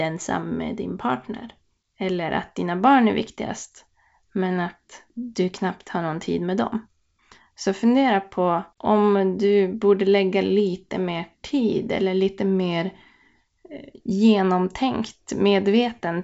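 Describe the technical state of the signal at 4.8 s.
At 4.8 s the speech is intact, carried by G.722 wideband telephone coding at 64 kbit/s with no fault at that moment.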